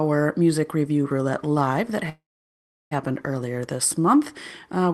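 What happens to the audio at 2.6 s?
At 2.6 s you're inside a call audio freeze running from 2.09 to 2.93 s, likely from packets stalling so the jitter buffer ran dry. The last sound gets stretched into a short fading buzz, then about 0.7 s of near-silence, and the sound picks up where it left off, nothing lost, just pushed about 0.82 s later.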